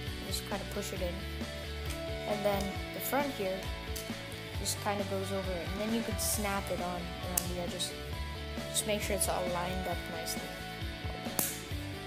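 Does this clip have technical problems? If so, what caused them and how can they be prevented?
Yes. A bit error spike sounds as one sharp tick at 9.73 s. A single flipped bit made one sample jump, peaking about -23 dBFS. Error-checked links and ECC memory prevent it.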